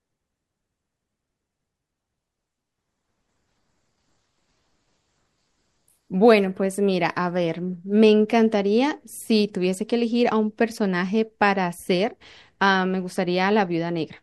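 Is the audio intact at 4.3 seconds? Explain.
Yes, the speech at 4.3 seconds is intact, with no dropout, click, distortion or other fault at that moment.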